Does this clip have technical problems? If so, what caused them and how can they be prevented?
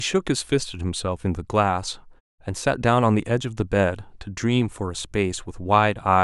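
No, nothing in this speech clip stood out as a technical problem on listening, so there is nothing to trace back or prevent.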